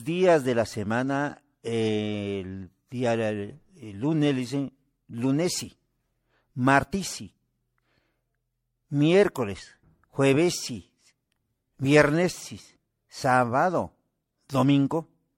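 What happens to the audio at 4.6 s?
At 4.6 s, as throughout, the speech sounds swirly, hollow and smeared, with nothing above 16.5 kHz. This is generation loss, likely from roughly seven low-bitrate MP3 re-encodes compounding their artefacts.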